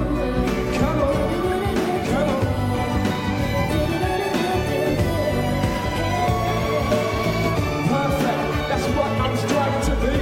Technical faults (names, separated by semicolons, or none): corrupt frame decoded